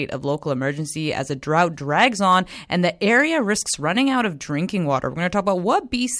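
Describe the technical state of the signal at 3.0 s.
At 3.0 s the speech signal is intact, with no audible fault at that moment.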